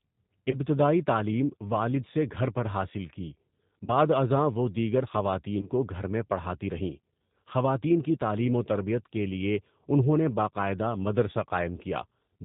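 A speech recording coded throughout with G.729 (the G.729A variant), whose damage is plainly audible. The rough, slightly synthetic timbre fits its 8 kbit/s rebuild of speech from a vocal-tract filter, a pitch predictor and a few pulses per frame. On a spectrogram, energy stops sharply at 4 kHz with nothing above it, and harmonics look smeared and grainy rather than cleanly striated. VoIP packet loss concealed by the speech codec occurs three times. Each dropout fits a single lost 20 ms packet. The first runs from 0.51 to 0.58 s, just before "تعلیم والد سے گھر". The second is at 3.86 to 3.89 s, just before "بعد ازاں وہ دیگر". The third spans 5.61 to 5.70 s, between "بعد ازاں وہ دیگر" and "کو گھر میں پڑھاتی". In each, the decoder repeats its last pitch and filter at falling gain, stretching the sound into a buzzy tone or coloured noise that fades. Because each frame depends on the one before, the distortion lingers beyond the lost audio itself. 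On a spectrogram this shows as a stretched continuation of the preceding sound that dims. The waveform shows the signal tapering in amplitude.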